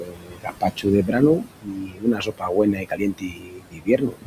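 Right from the start, you can hear noise suppressor artifacts. The suppressor is pulling what it thinks is steady noise down by about 21 dB, band by band, so the room noise (sitting about 11 dB under the speech) pumps between phrases and rises again under the words.

The same processing also produces speech cut by the noise suppressor, running from 0.0 to 4.27 s. It mistakes parts of the speech for noise and turns them down by as much as about 22 dB. That hits roughly three seconds' worth in total, so soft consonants and word tails come across swallowed and faint.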